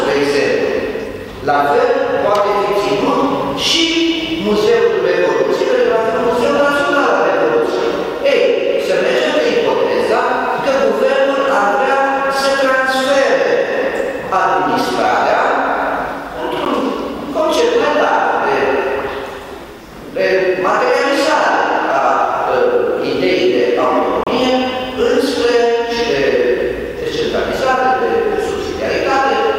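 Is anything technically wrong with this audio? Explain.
Yes. There are two blocks of digital silence. At 16.65 s the audio gives a sharp tick, a hole of about 10.7 ms. From 24.24 to 24.27 s a longer 32 ms gap sounds like a brief dropout. In both, the output buffer likely wasn't filled in time, so zeros were played instead. The abrupt jump to silence and back has no fade. The shorter gap fits a 512-sample buffer.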